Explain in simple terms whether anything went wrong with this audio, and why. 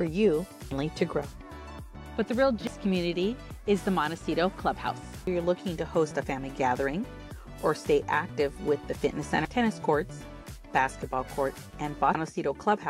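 Something did go wrong, at four moments: 2.67, 5.27, 9.45 and 12.15 seconds. Each is a brief disturbance caused by damaged data in a compressed stream, where part of the stored or transmitted file was corrupted. The player can't make sense of those bytes, loses its place, and has to hunt for the next readable chunk. Unlike a random crackle or dropout, it comes from the file itself, so it recurs identically on every playback.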